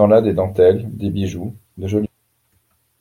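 At 2.05 s, right after "dentelles des bijoux de", the speech lurches forward with a brief blip lasting to about 2.09 s, the mark of a stream segment skipped. The likely cause is a chunk of the segmented stream failing to load, so the player resumed from the following one. Unlike a dropout, which leaves a silent hole and then picks up where it stopped, this jumps straight into later material with no pause.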